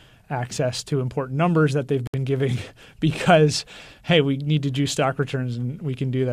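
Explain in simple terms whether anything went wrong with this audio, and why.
At 2.07 s, right after "important numbers that they've", the speech stops dead for about 68 ms: a gap at a join of encoded pieces. Two separately encoded chunks were stuck together with their padding silence left in. Unlike a dropout, nothing is missing; speech resumes exactly where it paused, at 2.14 s.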